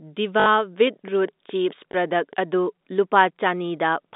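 A speech recording over a G.711 telephone line, band-limited to roughly 200 Hz to 3.7 kHz, shows packet loss with the last packet repeated: the receiver replayed stale audio, giving a buzzy robotic stutter from 0.40 to 0.46 s (60 ms, consistent with three 20 ms packets) and a small blip at 1.92 s (20 ms, one packet). A train of clicks also runs from 0.87 to 2.54 s, about ten regular ticks at 4.8 per second, roughly as loud as the speech itself, likely from electrical interference or a faulty connection.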